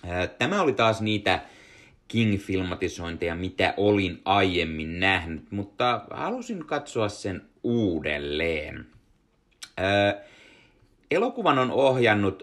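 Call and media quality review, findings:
No faults found on listening; no audible dropouts, distortion or other defects to attribute to any component.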